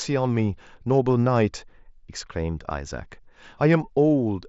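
Nothing stood out on listening to this speech, which comes through the Bluetooth mSBC headset codec with its usual 8 kHz bandwidth.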